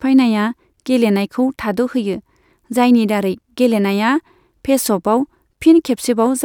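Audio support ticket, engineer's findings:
No faults found in this speech clip.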